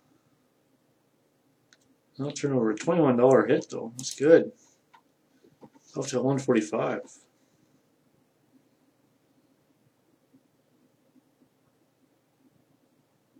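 Overlap between stream segments at 3.67 to 3.72 s and 5.67 to 5.70 s: overlapping segment timestamps make the player discard about 43 ms and 34 ms of real sound, causing a skip roughly two seconds apart.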